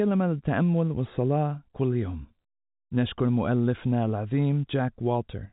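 No technical faults occur in this speech, which comes through the G.711 telephone path with its top cut at 4 kHz.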